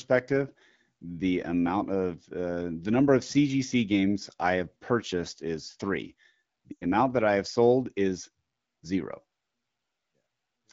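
At 6.72 s, just after "have purchased is three", lost AMR speech frames cut in. Radio errors spoiled about 100 ms of frames, which fits five 20 ms frames. The AMR-WB decoder repeats its last good settings with falling gain. The sound smears briefly, then fades fast. It returns at 6.84 s with "amount that I have".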